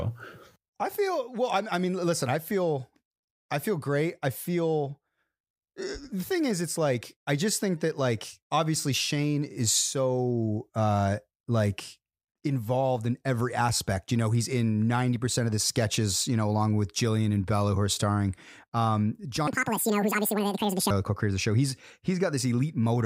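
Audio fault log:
19.48 to 20.90 s: section at the wrong speed. Speech runs 1.93 times too fast and about ten semitones high, speed and pitch rising together, likely from playback against a mismatched clock.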